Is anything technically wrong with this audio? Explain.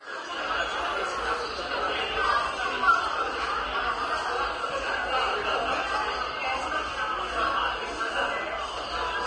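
Yes. Throughout the clip there is heavy codec damage, likely from Vorbis compression at a low setting, which fits a bitrate around 31 kbps. Nothing remains above 10.6 kHz, and the treble below that cut-off has been quantised so coarsely that its fine detail turns into hiss-like noise of similar energy. The sound comes across as grainy, with roughened tones and smeared attacks. A plain low-pass filter would only dull the top end, but here the remaining highs are noisy rather than clean.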